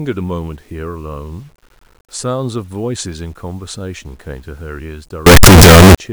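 Signed and unsigned mixed up, from 5.26 to 5.95 s, in this 8-bit speech clip: the speech turns into very loud, harsh distortion with quiet moments as loud as the rest, likely because 8-bit samples were read with the wrong sign convention.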